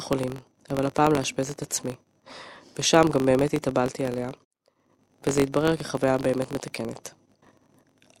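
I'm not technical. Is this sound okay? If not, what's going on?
No, there's a steady buzz running under the speech from start to finish. It's a filter restarted on every block: the processing works in small chunks, and the filter forgets where it left off each time, so every chunk starts with a tiny click. Those clicks come about 47 times a second, which fits chunks of 1024 samples, and they blur into a buzz that gets louder when the speech does.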